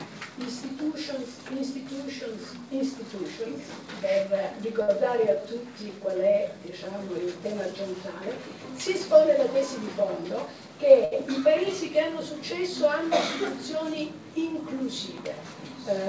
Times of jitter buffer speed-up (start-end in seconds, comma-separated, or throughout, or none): 10.29-10.69